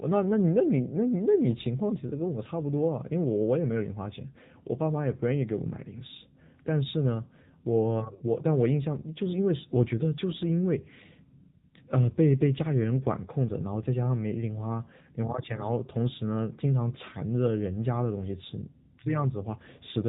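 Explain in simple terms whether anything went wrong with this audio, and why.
AMR narrowband mobile codec damage runs through the whole clip, from the first second to the last. This is the speech codec used on older mobile phone networks. It keeps only sound below 4 kHz, so the speech loses its crisp upper detail and sounds muffled, like a phone call. The codec also rebuilds the voice from a simplified model of the throat and mouth, and here the result is plainly audible, with a buzzy, artificial edge.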